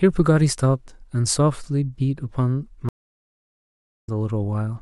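At 2.89 s the connection drops and the speech goes silent for 1.13 s. A stream reconnect restarts decoding at 4.09 s, skipping roughly a third of a second.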